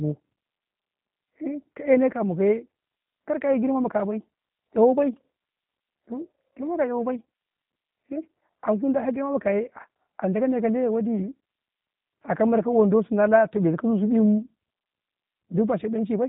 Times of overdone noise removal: none

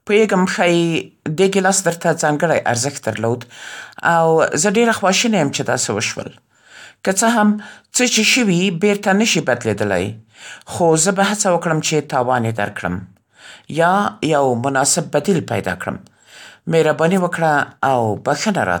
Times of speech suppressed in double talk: none

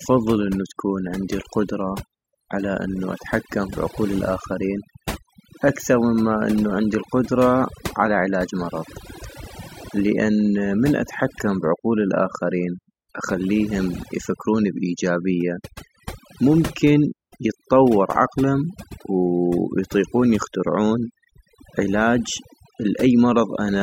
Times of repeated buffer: none

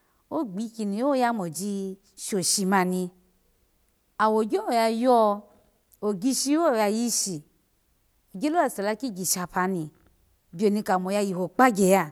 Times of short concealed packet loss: none

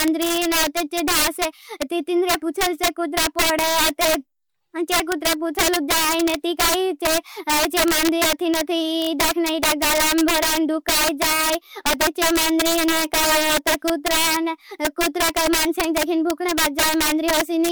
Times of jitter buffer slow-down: none

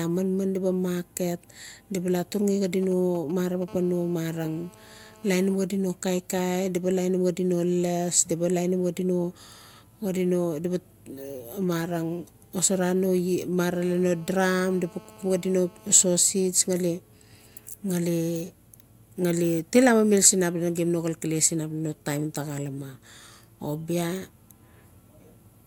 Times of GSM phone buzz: 3.68-5.55, 13.74-16.06

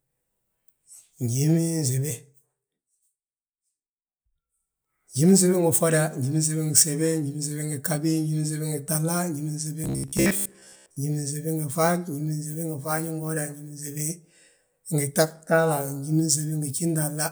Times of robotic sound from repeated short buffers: 9.84-10.97

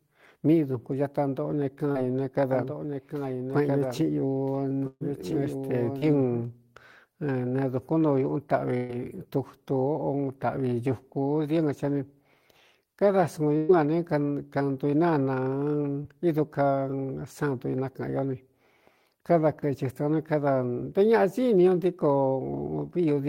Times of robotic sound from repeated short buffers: none

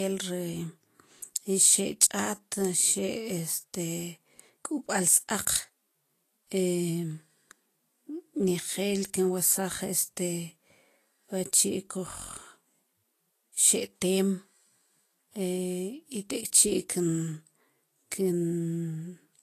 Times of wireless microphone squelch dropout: none

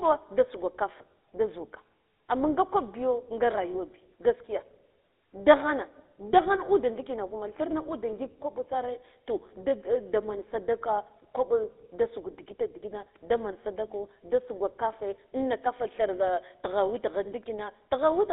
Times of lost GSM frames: 0.98-1.01

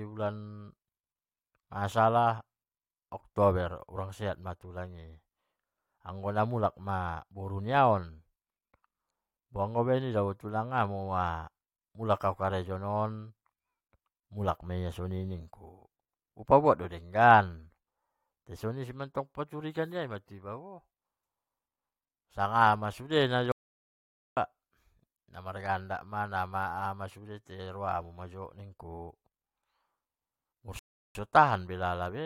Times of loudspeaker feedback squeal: none

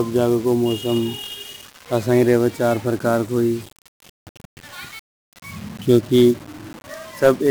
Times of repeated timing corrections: none

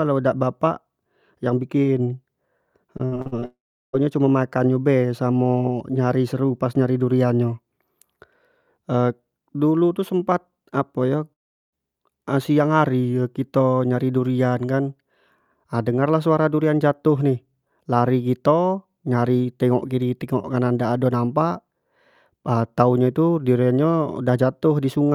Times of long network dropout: 3.45-3.95, 11.33-11.74

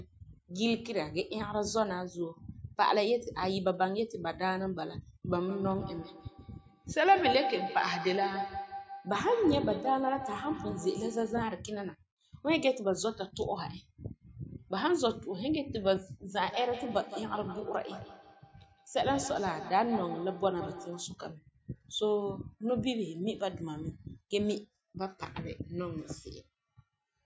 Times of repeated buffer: none

